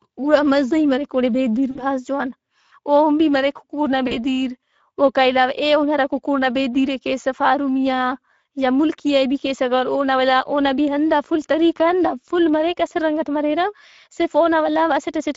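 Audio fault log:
throughout: Speex codec. The speech has a plainly audible hoarse, grainy texture, which fits a Speex setting near 16.8 kbps. At that rate the CELP excitation gets too few bits to match the real voice source, so the decoder substitutes a rough approximation. On a spectrogram, harmonics look smeared and noisy between formants. The waveform shows a hissy floor riding on the voiced segments.
1.71–1.84 s and 4.07–4.17 s: VoIP packet loss concealed by the speech codec. Each gap lost about 40 ms of audio. The decoder carried its last pitch and filter forward and lowered the gain frame by frame, which stretches the sound into a brief buzzy tone or coloured noise that fades out. Because each frame rebuilds from the previous one, the voice stays thin for a moment after the audio returns. A spectrogram shows frozen, repeated harmonics that dim across each span, and the waveform shows a decaying periodic envelope.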